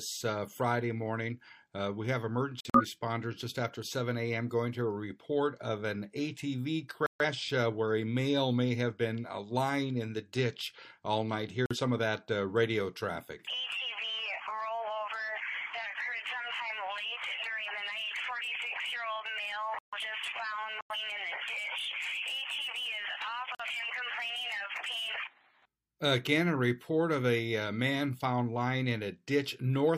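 Corrupt frames are muted at 2.60–2.84, 7.06–7.25, 11.66–11.77, 19.79–19.98, 20.81–20.96 and 23.55–23.65 s. The decoder rejected damaged frames, leaving abrupt silent holes that show as flat waveform and blank spectrogram columns, with timing kept.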